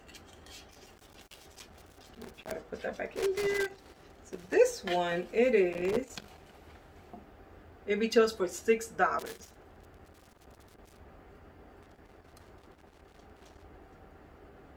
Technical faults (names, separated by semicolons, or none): loose connector crackle